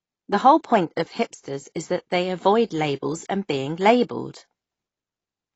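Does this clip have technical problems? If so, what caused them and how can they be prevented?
Yes. Throughout the speech, nothing sounds above 8 kHz, and the sibilants and sustained vowels carry a watery, fizzy warble with a dull, smeared top end. This is likely AAC compression: an AAC-LC encoder starved of bits lowers its cut-off and quantises high bands so coarsely that they turn to noise or drop out between frames, which fits a bitrate near 24 kbps. A plain low-pass filter would be dull but clean, without this shifting, swirling texture. Encoding speech at a higher bitrate would prevent it.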